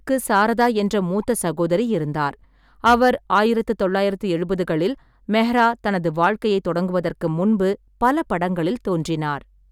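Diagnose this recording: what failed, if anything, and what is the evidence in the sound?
Hard clipping is the failure, at the converter input or a gain stage ahead of it. The speech peaks overload it in five places: 0.34–0.67 s, 2.86–3.39 s, 5.36–5.67 s, 6.23–6.27 s and 8.04–8.10 s. Most are driven about 2 dB past full scale and give brief crackle. The one at 2.86 s is about 6 dB over. The stage cannot pass those levels, so waveform tops are cut flat, adding high harmonics.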